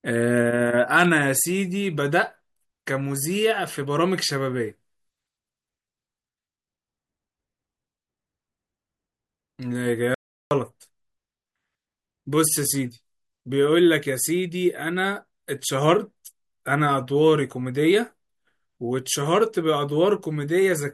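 An audio dropout to silence runs from 10.15 to 10.51 s, about 0.37 s, where the speech cuts off abruptly and the gap is silent with no room tone. The input was likely lost briefly while recording continued writing silence.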